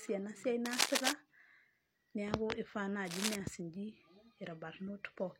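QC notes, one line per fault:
0.65–1.12 s and 3.05–3.36 s, cable scratch noise: dense, ragged bursts of scratching and rustling sit over the speech, about 5 dB above it in the first stretch and roughly level with it in the second, each lasting under half a second. This is likely a worn cable, connector or control being moved, its contact resistance jumping rapidly and injecting irregular noise into the signal path for as long as the movement continued.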